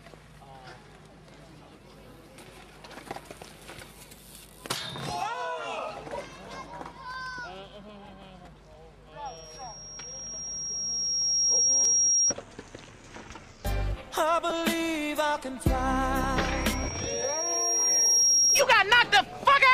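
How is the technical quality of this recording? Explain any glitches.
The recording has two recurring problems: a feedback squeal that appears twice and two brief repeated-buffer glitches.

Loudspeaker feedback squeal, 9.25–12.34 s and 16.15–18.68 s: a single 5.6 kHz tone swells over roughly two seconds into a squeal, about 5 dB above the audio the first time and about 10 dB the second. A microphone is picking up the loudspeaker it feeds, and at 5.6 kHz the loop gain exceeds one, so that frequency keeps building.

Repeated buffer, 11.84 s (during the first squeal) and 14.50 s: each is a click-like brief buzz. A piece of about 5 ms, which suggests a small playback buffer, is played again three times and then twice more because new audio arrived late. The hard joins together cause the buzz, and roughly 15 ms and 10 ms of audio are lost.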